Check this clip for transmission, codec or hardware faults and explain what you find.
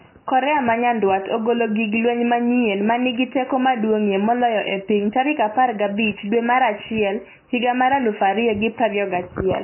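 One fault runs through the whole speech clip: heavy MP3 compression is the likely cause. With nothing above 3 kHz, the encoder cut the treble and dropped weak frequency lines that flicker between frames, which fits a very low bitrate around 16 kbps. It sounds dull, watery and swirly, with smeared consonants. A spectrogram shows a hard ceiling at 3 kHz and patchy, blinking gaps below it.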